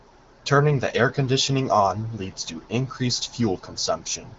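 No faults to report: the speech carries the band-limited sound of the AMR wideband (HD Voice) codec, with nothing above 7.6 kHz and a light coding texture that fits its 15.85 kbit/s mode.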